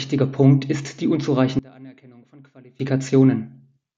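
From 1.59 to 2.80 s the speech drops by about 26 dB and what remains is a faint copy of the voice. The likely cause is one channel inverted: with one side's polarity reversed, the centred voice cancels when the channels are summed to mono, leaving only their small differences. Unlike a plain gain drop or dropout, the residue isn't simply quieter or silent but is a faint remnant of the mismatch between the channels.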